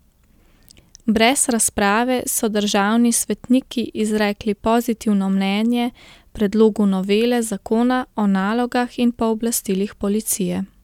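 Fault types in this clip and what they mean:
No technical faults are audible in this recording.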